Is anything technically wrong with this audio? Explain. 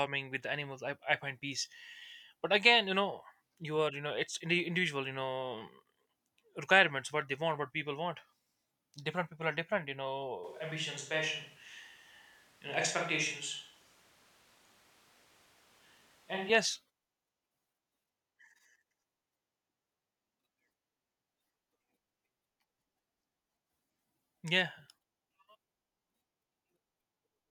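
Yes. From 10.44 s to 16.49 s the speech abruptly turns roomy and hollow, thinner in the bass, and drops by roughly 5 dB, with background noise rising to around 30 dB below the speech. At 16.49 s the close, full sound returns just as suddenly. This is a switch to a distant microphone: the close mic's signal was likely lost or left out for that stretch, so a microphone farther away, picking up more room reflection and ambient noise, filled in.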